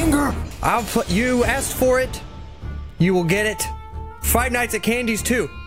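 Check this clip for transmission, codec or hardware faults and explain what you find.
No transmission, codec or hardware faults are audible anywhere in this recording.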